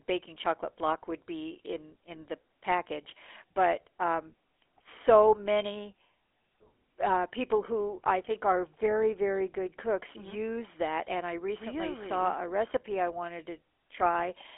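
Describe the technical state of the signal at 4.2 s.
At 4.2 s the speech carries GSM full-rate codec damage, present across the whole clip. The vocal tract is rebuilt from a coarse pulse excitation, giving a buzzy, gravelly roughness, which fits a 13 kbps coder, unlike a clean telephone band-limit. Nothing passes above 3.8 kHz.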